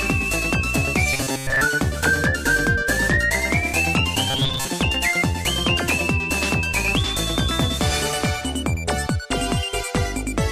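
From 1.13 to 1.61 s and from 4.30 to 4.67 s, the sound becomes a rigid, metallic 134 Hz buzz: robotic sound from repeated short buffers. A 7.5 ms segment was likely looped to cover most of the late audio, fixing that pitch.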